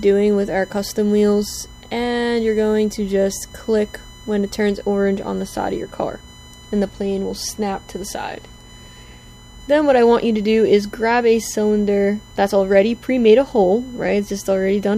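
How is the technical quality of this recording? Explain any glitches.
The recording is marred by a steady USB whine running through all of it, a fixed-pitch tone at 1 kHz whose strongest component sits at 3 kHz, roughly 30 dB below the wanted sound. The USB bus draws current in 1 ms frames, and that pulsing leaks in through the power or ground, producing a thin whine. Mains hum, by contrast, is built on 50 or 60 Hz and its harmonics rather than on multiples of 1 kHz.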